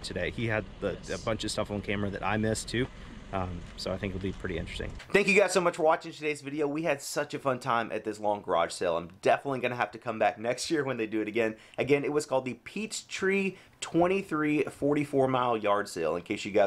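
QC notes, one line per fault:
No faults were heard in this clip. Nothing in the audio calls for a QC entry.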